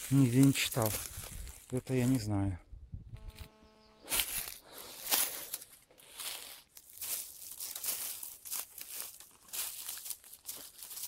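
From 3.15 s to 4.08 s a GSM phone buzz sits under the sound, about 29 dB below it. A nearby 2G handset on a call was pulsing its transmitter 217 times a second, and the audio circuitry rectified those radio bursts into a hard, raspy drone at 217 Hz, rich in harmonics and nearly steady. Unlike mains hum, its fundamental isn't tied to 50 or 60 Hz, and it sounds gritty rather than smooth.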